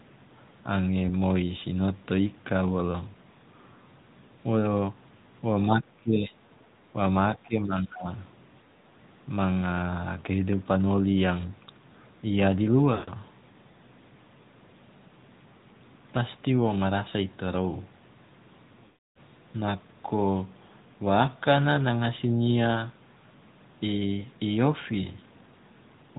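Throughout, the speech sounds muffled and somewhat buzzy, with nothing above 4 kHz and a synthetic edge on voiced sounds. This is the AMR narrowband mobile codec, which rebuilds the voice from a simple vocal-tract model; the plainly audible damage fits a middle bitrate such as 10.2 kbps.

From 7.25 to 8.1 s, the voice sinks by roughly 20 dB at its deepest and breaks up for most of that stretch. This is likely speech suppressed in double talk: with both sides talking at once, the echo canceller turned this talker down along with the echo.

At 12.94 to 13.11 s, the voice smears into a drawn-out, fading buzz for about 140 ms before returning rough. These are lost AMR speech frames, roughly seven of them. The decoder repeated the last good pitch and vocal-tract settings at falling gain.

From 18.86 to 19.17 s, a longer 300 ms gap of lost AMR speech frames, roughly fifteen of them, stretches the sound and then fades it to silence within the first fraction of a second. 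The voice then comes back weak.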